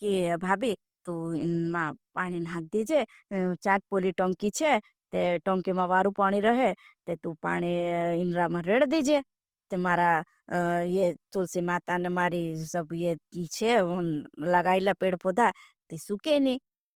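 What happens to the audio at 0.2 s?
At 0.2 s the speech carries Opus compression damage, which runs through the whole clip rather than starting there. The texture is grainy and rough, with a noisy fizz over the voice's harmonics instead of a swirling, watery sound. This is likely Opus in its music (CELT) mode at a low rate, around 24 kbps, where bands that run short of bits are refilled with folded copies or noise. A spectrogram shows smeared, speckled bands with few gaps, reaching up to about 20.2 kHz.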